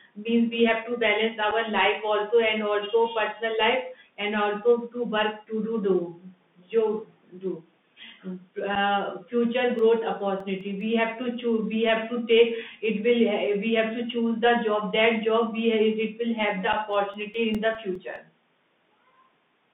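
Bluetooth CVSD headset codec damage runs through all of this speech recording. The line is confined to roughly 150 Hz to 3.6 kHz, which fits a 64 kbps CVSD link, where each sample is coded as a single up-or-down bit with an adapting step size. That coarse tracking is plainly audible: loud high-frequency energy outruns the step and distorts, sibilants come out scratchy, and a granular hiss sits beneath the speech. Unconcealed Bluetooth headset packet loss punches short holes at 1.51 s, 8.75–8.77 s and 16.73 s, each about 7.5 ms, consistent with a single lost packet. Each time, a packet travelling between headset and phone never arrived and nothing reconstructed it, so the gap was filled with silence or an idle pattern, leaving an abrupt-edged hole that can click at its boundaries. CD scratch ticks appear twice: six ticks between 9.79 and 10.81 s, each no longer than about a millisecond, and seven ticks between 16.93 and 18.16 s, the longest around two milliseconds. 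Both runs repeat at roughly six per second, the signature of a blemish passing under the laser once per revolution. Each pass corrupted more data than error correction could recover, so the player interpolated over or muted the damaged samples, leaving a short, regular train of ticks.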